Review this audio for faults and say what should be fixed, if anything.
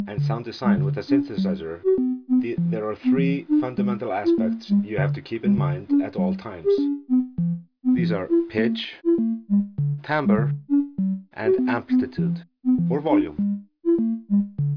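Nothing in the audio needs fixing. No technical problem can be heard anywhere in the recording, so no change to how it was captured or processed is called for.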